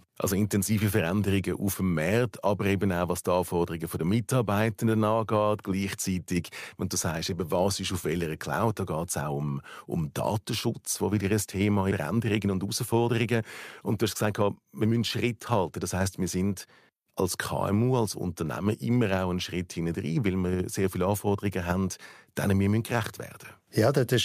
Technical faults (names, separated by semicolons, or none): jitter buffer speed-up